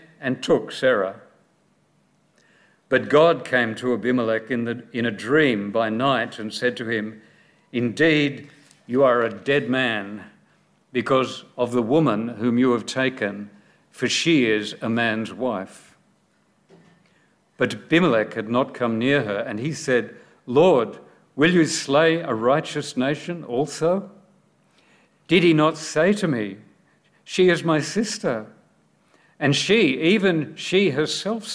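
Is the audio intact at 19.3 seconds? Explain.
Yes, at 19.3 seconds the audio plays through cleanly, with no dropout, click, distortion or other break to be heard.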